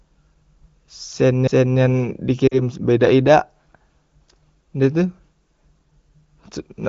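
Lost AMR speech frames at 2.47 to 2.61 s: about 40 ms of audio, which fits two 20 ms frames, failed its checksum. The AMR-WB decoder repeated the last good pitch and vocal tract settings at falling gain, giving a brief dip toward near silence before the speech returns weak or rough for a moment.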